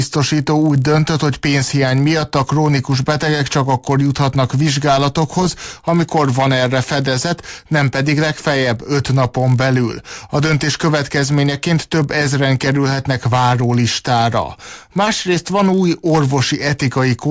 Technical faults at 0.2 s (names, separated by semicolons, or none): resampler restarted on every block